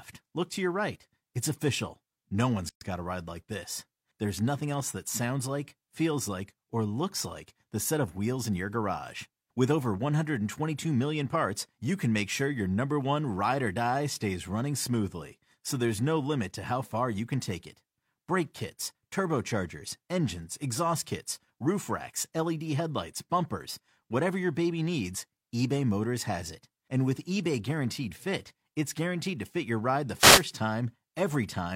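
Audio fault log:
2.69–2.81 s, gap at a join of encoded pieces: the speech breaks off in a 121 ms gap, then resumes on "got a ride like" exactly where it left off. Two separately encoded segments were joined without trimming. The encoder's start-up delay and the padding on the final frame of the earlier piece both remain as silence at the splice. The gap's edges are smeared by the codec, and nothing is missing from the speech on either side.
30.17–30.45 s, wireless microphone noise hit: right after "fit your ride the", a burst of static about 0.27 s long swishes over the speech. The FM radio link from the microphone faded as multipath reflections partially cancelled the carrier. With less signal reaching the receiver, its noise floor rose until the signal recovered. This produces the brief hiss-like swish rather than a clean dropout.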